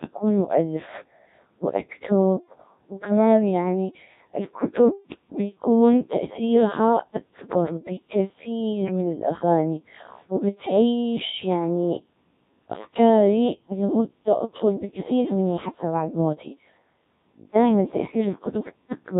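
From start to finish the speech has gone through a Codec 2 vocoder, and heavily so. Only pitch, voicing, energy and a rough spectral shape survive, which fits a setting around 1.3 kbit/s. The decoder rebuilds everything from sine waves, hence the robotic, buzzy voice.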